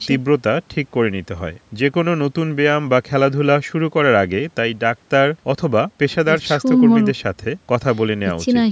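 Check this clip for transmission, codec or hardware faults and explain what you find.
No transmission, codec or hardware faults found in this speech.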